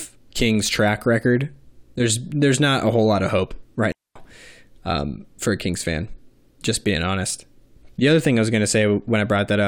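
At 3.92 to 4.16 s, just after "whole lot of hope", a digital wireless dropout mutes the speech for 0.24 s: the receiver lost data and left a clean, noise-free hole.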